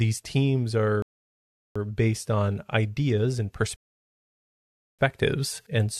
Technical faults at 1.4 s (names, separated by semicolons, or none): rebuffering stall